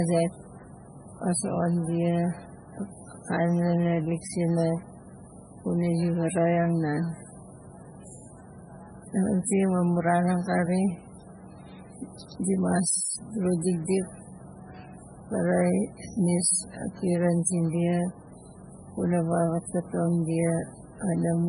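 A starved MP3 encoder is the likely cause of the damage running through this whole speech recording. The heavy artefacts fit a very low bitrate of about 16 kbps. With so few bits, the treble is removed above 10.5 kHz, leaving the sound dull. Weak frequency lines drop in and out from frame to frame, giving the speech a watery, swirling texture with metallic chirps on s sounds and smeared consonant attacks.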